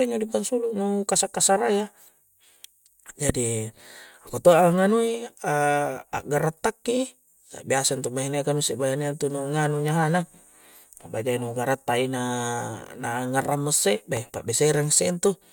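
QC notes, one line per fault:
3.29–3.32 s and 14.17–14.19 s, loud pop: two single sharp pops sit on top of the speech, which continues underneath. The first peaks about 15 dB and the second about 10 dB above the signal. Each is likely a brief voltage pulse from a switch, connector or static discharge.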